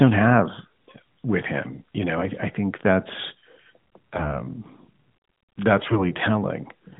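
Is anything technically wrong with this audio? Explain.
Yes. There are two bursts of AMR bit errors, from 1.70 to 1.82 s and from 5.78 to 6.06 s. The link corrupted the lightly protected bits of the narrowband speech frames. Misplaced excitation pulses and skewed gain and spectral values turn the voice hoarse and gargly, though pitch and level hold. The second burst is longer and harsher, with roughly a tenth of bits flipped against a few percent in the first.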